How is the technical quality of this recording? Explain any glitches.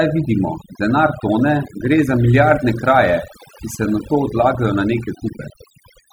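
The recording is marred by one fault. Overdone noise removal, throughout: the denoiser was pushed too hard, cutting any frequency band near its noise estimate and taking the quieter parts of the speech with it, so the background drops and breaks up into twinkling specks.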